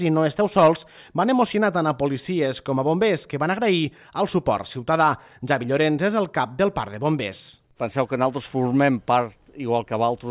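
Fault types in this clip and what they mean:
No faults can be heard anywhere in the clip, and the signal keeps a steady, continuous technical state throughout.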